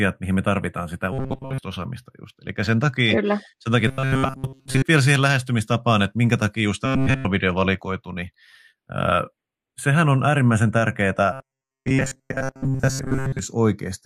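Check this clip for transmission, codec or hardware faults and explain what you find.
Two faults are present in the speech. The recording has slow flanging throughout, and four stretches turn into a rigid, metallic buzz.

Channels drifting apart, throughout: a slow, sweeping flange as the two channels slide apart by roughly 0.2 ms by the end. Separate device clocks differ by around 20 ppm.

Robotic sound from repeated short buffers, at 1.13–1.58 s (after "mihin me tarvitaan sitä", before "osaamista just"), 3.88–4.84 s (after "sen takia", before "vielä siihen lähestymistapaan että"), 6.86–7.26 s (after "että minkä takia just", before "valikoitu niin") and 11.33–13.39 s: a metallic 133 Hz buzz that roughly tracks the speech. The likely cause is starved audio being padded by repeating about 7.5 ms buffers, replacing most of the real signal.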